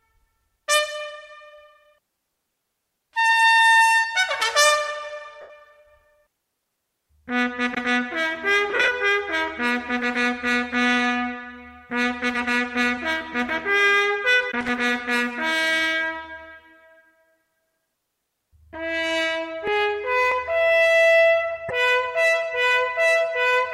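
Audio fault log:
5.41 to 5.50 s and 8.70 to 8.88 s, lost LE Audio frames: The Bluetooth LE Audio link dropped packets, and the LC3 decoder covered each gap by replaying the last good spectrum with scrambled signs, fading it as the gap ran on. The first dropout covers about 82.5 ms in one stretch. The second loses about 105 ms scattered across 180 ms, with the longest unbroken gap around 50 ms. That fits whole 7.5 ms frames going missing. Each gap turns the sound into a brief noisy smear.
14.61 to 14.69 s, loose connector crackle: A worn or dirty contact in the analogue path briefly made and broke connection, chopping the signal on and off over about 80 ms. The rapid, uneven interruptions are heard as a short, irregular burst of scratchy crackle layered over the sound.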